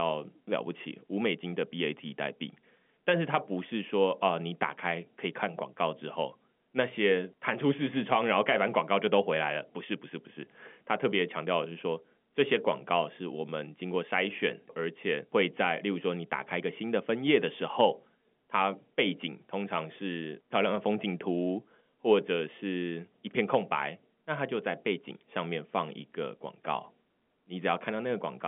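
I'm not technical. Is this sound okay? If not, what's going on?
Yes, there's no technical fault here; the audio has the narrower, slightly boxy sound of an ordinary landline call because it went through standard G.711 telephone coding, which drops everything above about 3.6 kHz, and that is exactly how it should sound.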